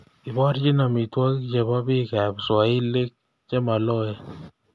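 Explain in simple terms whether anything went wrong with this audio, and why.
Listening closely to the recording, nothing stood out as having gone wrong with the sound.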